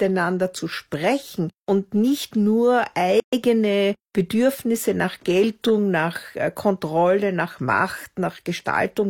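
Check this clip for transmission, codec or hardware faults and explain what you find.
One fault shows up in this speech clip. At 3.20 s, right after "sprechen und nicht nur", a gap at a join of encoded pieces cuts in: 127 ms of silence where separately encoded segments were joined without trimming encoder delay and padding. Its smeared edges and the unchanged resumption mark it apart from a dropout that loses sound.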